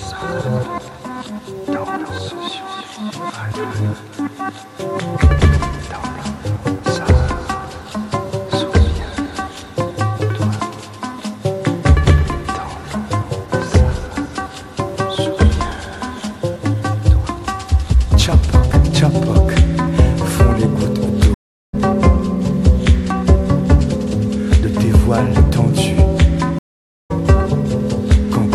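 At 21.34 s the audio drops out for 0.39 s, until 21.75 s. This is a stream reconnect. The connection broke, the player went quiet, then rejoined the stream with a fresh decoder. When sound returns, it has jumped ahead by roughly 0.4 s, so that material is simply gone. It happens again at 26.59 s. This silence lasts 0.51 s, to 27.12 s. The sound then resumes about 0.3 s further on, with an audible skip.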